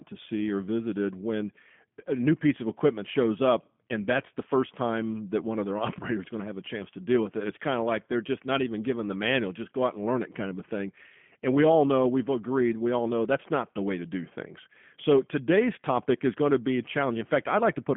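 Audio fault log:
Throughout: G.729 codec. The speech is band-limited to the telephone line band, about 150 Hz to 3.4 kHz, with nothing above 3.5 kHz, and the codec damage is plainly audible as a rough, slightly synthetic texture. Each 10 ms frame is rebuilt from a vocal tract filter, a pitch predictor and a few coded pulses rather than the original waveform, so fine detail is lost. The sound fits an 8 kbit/s G.729A stream.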